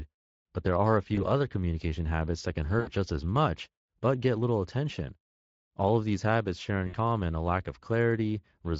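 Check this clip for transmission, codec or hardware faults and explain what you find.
Two faults are present: Speex coding damage across the whole speech clip, and three short dropouts patched by packet loss concealment.

The Speex codec colours the speech throughout with plainly audible damage. Its CELP model has too few bits to reproduce the excitation faithfully, so the voice turns noisy and hoarse. The character fits a Speex stream at roughly 20 kbps.

VoIP packet loss concealed by the speech codec occurs at 1.15 to 1.27 s, 2.79 to 2.91 s and 6.87 to 6.96 s. Each time, the decoder stretched its last pitch and filter while lowering the gain, so the lost stretch is filled with extrapolated sound that fades. The three gaps point to about 20, 80 and 60 ms of lost audio. The degradation persists briefly after each one.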